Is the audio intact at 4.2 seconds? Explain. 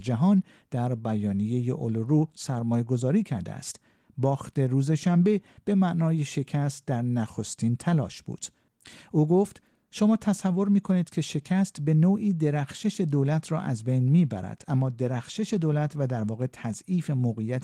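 Yes, the audio is intact at 4.2 seconds, with no fault at that moment.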